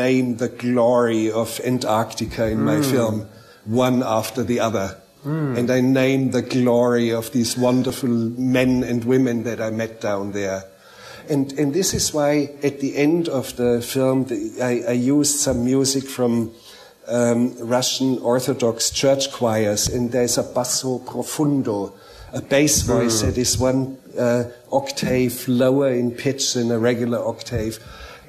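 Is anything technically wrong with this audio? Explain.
Yes. The audio has an overlap between stream segments, heard as tiny skips at about 7.90 s, 11.90 s and 19.87 s. Each falls near a 4-second segment boundary. Two segments claim overlapping time, and the player trims a few milliseconds of sound that was never duplicated, so the waveform jumps. Unlike a dropout, no silent gap appears. The sound skips forward, and the boundary-locked timing sets it apart from random clicks.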